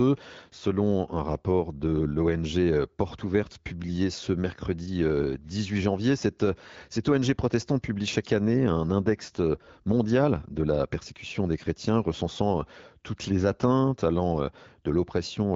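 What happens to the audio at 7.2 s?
Nothing goes wrong at 7.2 s: the speech carries on intact through the AMR wideband (HD Voice) codec, which at 12.65 kbit/s leaves it clear.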